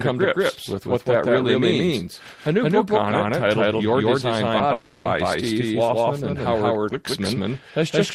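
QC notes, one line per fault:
Throughout: doubled audio track. A second full-band copy of the speech runs roughly 150 ms behind the original at about the same level, with no decay or room colour, giving a flat slapback echo. Likely caused by a slower second capture path or misaligned edit copies.
4.57 to 4.61 s: short concealed packet loss. About 20 ms of audio failed to arrive in time, and the receiver extended the preceding sound to bridge the gap before blending back, producing a brief smear or wobble in the speech.
4.73 to 5.07 s: long network dropout. Roughly 320 ms went missing, and the receiver kept synthesising a continuation of the last sound across the whole span instead of falling silent, heard as a fading buzz or hiss. Speech resumes afterward, with the lost portion gone, likely from a network interruption.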